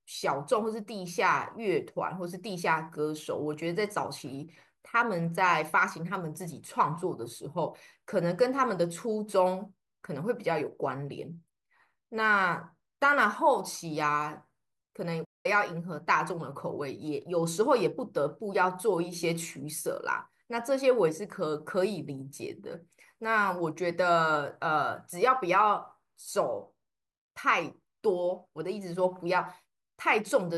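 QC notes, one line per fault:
15.24–15.46 s, playback stall: the speech drops to silence for 199 ms mid-flow, then carries on, likely because the player briefly ran short of data.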